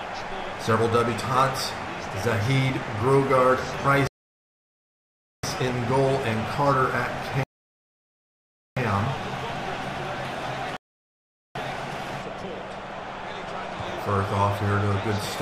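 At 4.07 s, 7.43 s and 10.77 s the sound halts in rebuffering stalls of 1.36, 1.33 and 0.79 s while the player waits for more data, then resumes exactly where it stopped. Nothing is lost. Spectrogram and waveform show clean, flat silent gaps.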